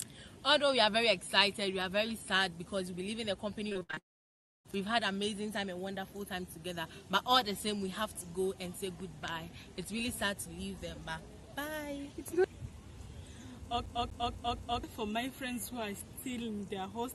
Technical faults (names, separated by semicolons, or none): repeated packet loss (robotic sound); long network dropout; CD stuck on one turn